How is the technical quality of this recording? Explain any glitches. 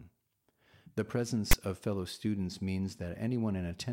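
The recording has one clear glitch: file tags played as audio. It occurs between 1.51 and 1.53 s, a burst of about 20 ms. A block of text metadata was read by the decoder as if it were sample data. Text bytes sit in a narrow numeric range, so they form a lopsided waveform shifted away from zero. The result is a loud, harsh rasp with abrupt edges. It sounds like a sudden stab of static.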